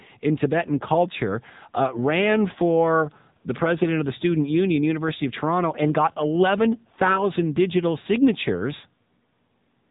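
From start to finish the speech carries the sound of the AMR narrowband mobile codec. Nothing passes above about 3.8 kHz, so sibilants lose their hiss and the voice sounds boxed in and phone-like. Its 20 ms frames rebuild the voice from a vocal-tract model and sparse pulses, which makes it plainly buzzy and synthetic, fitting a low mode near 8 kbps. A spectrogram shows a hard ceiling at 3.8 kHz with smeared, blocky harmonics beneath.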